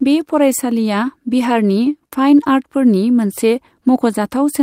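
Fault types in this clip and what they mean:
Nothing stood out on listening to this speech recording.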